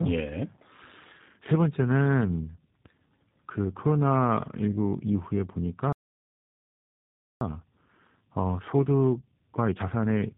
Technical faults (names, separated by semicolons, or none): tandem speech coding; playback stall; time-compressed catch-up